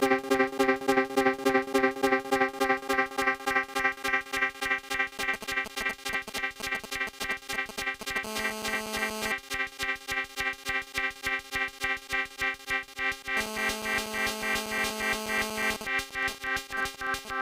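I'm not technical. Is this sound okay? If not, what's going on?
No, there's interference from a 2G mobile phone sitting close to the recording gear.

From 5.19 to 8.18 s you hear GSM signalling bursts, a galloping dit-dit-dit of short buzzes. That's the phone sending brief radio bursts while connecting, and the audio circuit picks them up. GSM signalling bursts return from 15.81 to 17.31 s, when the phone is in a call but its user has gone quiet, this time as even ticks with a longer buzz twice a second.

From 8.25 to 9.32 s and again from 13.37 to 15.77 s there's GSM phone buzz, a hard, raspy drone. During a call the phone transmits 217 pulses a second, and the electronics turn those radio pulses into a steady sound that has nothing to do with the recording.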